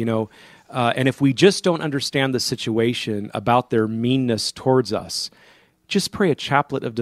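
Just after "about their meanness towards", from 4.99 to 5.01 s, a brief chirp, squeak, blip or burst of noise cuts in. It is a corrupt frame decoded: one damaged compressed frame was played anyway, scattering energy across wrong frequencies.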